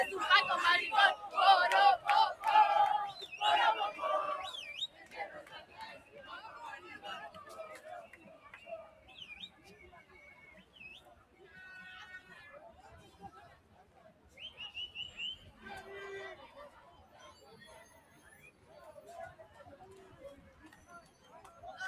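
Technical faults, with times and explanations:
Throughout, noise suppressor applied to music or sounds: a suppressor built for speech stays active on this non-speech audio. It treats steady, sustained parts of the sound as background noise and keeps pulling them down, so its gain swings by roughly 15 dB as it moves between letting the sound pass and cutting it. Level therefore rises and falls with the suppressor's decisions rather than with the sound itself.
4.88–6.15 s, 8.1–11.41 s, 13.11–14.37 s, 16.89–18.71 s, 20.44–21.32 s, sound cut by the noise suppressor: in each stretch the suppressor takes the sound for noise and turns it down harder than elsewhere, by about 8, 9, 8, 8 and 7 dB at the deepest. The longest stretch, 8.1–11.41 s, loses level over about a second and a half. The other stretches lose it over roughly a second or less, so the sound sinks in level.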